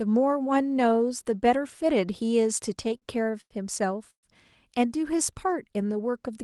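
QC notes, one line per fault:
2.83–3.53 s, repeated stalls (stutter): The sound catches six times in about 0.7 s, each catch a brief held tone before it moves on. Packets arrived late, the jitter buffer kept running dry, and the receiver stretched the last sound to cover each wait. The gaps total 189 ms, the longest 95 ms, about 27% of the span, with nothing lost. On a spectrogram, six short patches of flat, smeared harmonics break the normal flow. The waveform shows repeated periodic stretches, the longer ones tapering.
4.10–4.26 s, call audio freeze: A single hold of 125 ms. A short buzz carries on from the last sound and fades, leaving about 100 ms of near-silence before the audio resumes exactly where it stopped, with nothing missing. The likely cause is a packet delay that drained the jitter buffer, with playback pushed back 125 ms. The spectrogram shows a brief frozen band decaying into an empty column. 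The waveform shows a shrinking periodic tail, then a flat line.
5.01–6.12 s, jitter buffer slow-down: The audio drags at about 91% speed with unchanged pitch and sounds drawn out. The receiver repeated single pitch periods and bits of pause to rebuild its buffer reserve, adding 108 ms over this stretch. On a spectrogram, formants and harmonics run longer than normal at steady frequency, cut off at the call path's 12 kHz limit. The waveform shows near-identical cycles repeated back to back.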